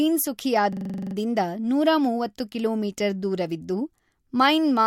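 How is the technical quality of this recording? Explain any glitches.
The recording has one clear glitch, a system hang loop, in the speech from 0.73 to 1.15 s. For that stretch a 42.7 ms fragment repeats exactly ten times, about 23 times per second, which fits a 2048-sample ring buffer that the sound hardware kept replaying while the system stalled. It sounds like a rapid, buzzy machine-gun stutter. The waveform shows identical repeated blocks, and a spectrogram shows evenly spaced vertical stripes with frozen, copied frequency content.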